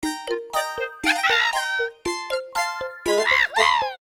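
Nothing goes wrong anywhere in this short clip; the sound just runs along steadily without a single hiccup worth pointing out.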